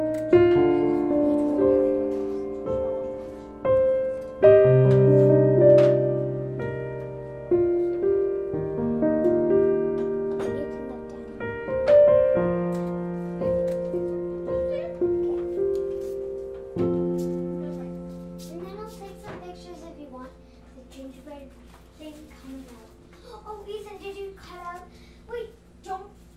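No technical faults can be heard anywhere in the audio, and the signal holds steady throughout without any disturbance to its level or continuity.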